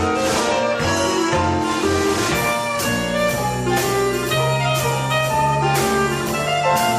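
No audible technical faults anywhere in this clip.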